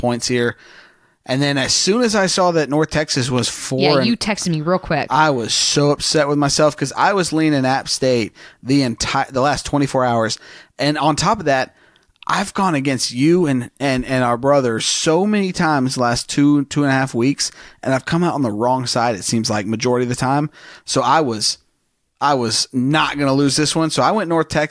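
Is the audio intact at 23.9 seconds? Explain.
Yes, at 23.9 seconds the speech plays through cleanly, with no dropout, click, distortion or other fault to be heard at that moment.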